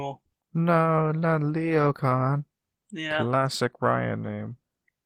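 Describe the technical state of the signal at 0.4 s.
At 0.4 s the speech carries Opus voice compression, present across the whole clip. A SILK predictive layer codes the band below 8 kHz and a CELT layer covers the top, at a rate that sounds near 16 kbps. The result is hoarse, slightly robotic speech. Unlike a plain low-pass, the highs stay present but sound coarse.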